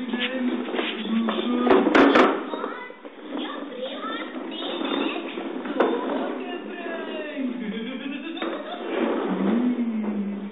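No technical faults are audible.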